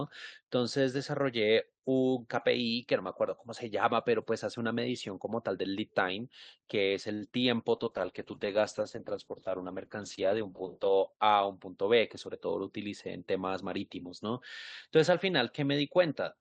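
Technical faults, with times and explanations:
7.13–7.23 s, short stall from a late packet: the sound hangs for a moment, one sound drawn out for 76 ms with a faint buzzy sameness before the speech resumes exactly where it stopped. A packet failed to arrive on schedule, the jitter buffer emptied, and the receiver extended the last sound until the packet turned up. Nothing is lost, but playback now runs 76 ms later than before.
7.29–7.44 s, short concealed packet loss: a brief smear or flutter passes through the speech, and a quick consonant in that span may simply be missing. About 20 ms of audio never reached the decoder in time. The receiver covered the gap by carrying the previous sound forward, following its pitch where voiced and as shaped noise where not, then faded back into the real signal.
7.73–11.15 s, call bitrate drop: the speech turns dull and rough, losing its crisp top end and taking on a watery graininess. 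The bandwidth estimate fell and the encoder was throttled from 64 to 11 kbps, sitting at the bottom for about 3.3 s. At that rate Opus codes coarsely and narrows the audio band from 20 kHz to 8 kHz, which removes the air.
11.53–12.48 s, jitter buffer speed-up: the speech sounds slightly hurried, at about 107% of normal pace, yet its pitch stays the same. The jitter buffer had built up more audio than its target, most likely after delayed packets arrived together. To trim the backlog, the receiver repeatedly cut out pitch-period-sized slices, about 70 ms in total, which shortens the timing without raising the pitch.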